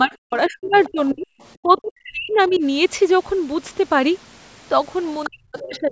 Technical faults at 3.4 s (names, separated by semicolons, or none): none